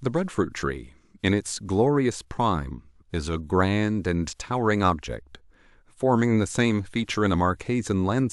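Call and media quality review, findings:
No defects found: the speech signal shows no dropouts, level disturbances or other technical problems anywhere in the recording.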